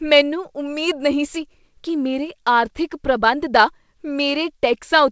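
The speech comes through a wideband call path with no faults to point to, its spectrum stopping at 8 kHz in a way consistent with a G.722 codec running at 64 kbps.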